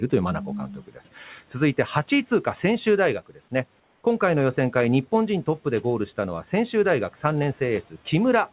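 From 0.8 to 0.99 s, speech is cut by the noise suppressor. About a tenth of a second of quieter speech sinks by up to about 10 dB, sounding swallowed rather than dropping out to silence.

From 3.8 to 4.04 s, the background turns smooth and featureless for 240 ms and sits about 2 dB lower. The likely cause is comfort noise in place of the background, filling a transmission pause; unlike a gap, the hiss never stops.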